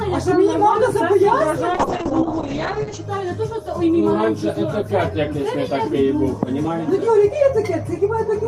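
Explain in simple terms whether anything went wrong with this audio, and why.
Something did go wrong, from about 1.72 s to 3.09 s. This is a call bitrate drop. The connection briefly seemed to have less room, so the audio was squeezed into far fewer bits. With so little data, the sound is coded roughly, and the top end is cut off above about 8 kHz. It turns muffled and a bit watery for roughly 1.3 seconds. Then full quality comes back.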